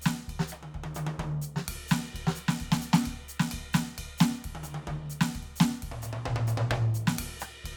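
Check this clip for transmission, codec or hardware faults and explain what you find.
Nothing wrong turns up anywhere in this music clip; it just sounds the way it should all the way along.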